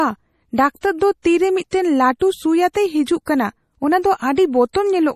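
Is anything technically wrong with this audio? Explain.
Yes. Throughout the speech there is a watery, swirling quality, and nothing is heard above 15.1 kHz. This is likely MP3 compression at a low bitrate, consistent with about 40 kbps. The encoder cuts the treble and drops weak frequency lines that flicker between frames.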